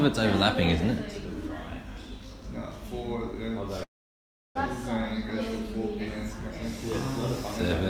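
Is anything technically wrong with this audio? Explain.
Yes. A call audio freeze runs from 3.83 to 4.57 s. The last sound trails off briefly, then about 0.67 s of silence follows. The jitter buffer likely ran empty while packets were delayed. Audio resumes with nothing lost, about 0.72 s late.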